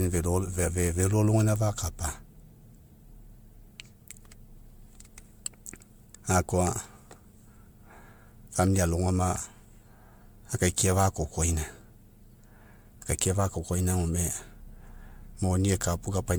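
From start to finish the speech carries generation loss, likely from being re-encoded as MP3 around seven times, at a rate that sounds like 128 kbit/s. The bandwidth still reaches 20.1 kHz, so a single encode at that rate would sound fairly clean. Instead, each pass re-quantised on a shifted frame grid, and the artefacts compounded into a swirling, hollow texture with smeared consonant attacks, worse than one encode at that rate would explain.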